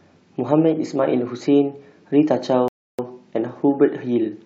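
At 2.68 s the speech stops dead and stays silent until 2.99 s, a rebuffering stall: the player exhausted its downloaded audio and paused until more data arrived. When sound returns, it picks up exactly where it broke off, so no speech is missing; the gap simply adds about 305 ms. That continuity separates it from a dropout, where the silence replaces audio and the speech jumps forward.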